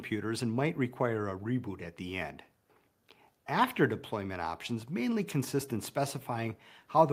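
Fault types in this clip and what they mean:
Nothing stood out on listening that would point to a technical problem with the audio.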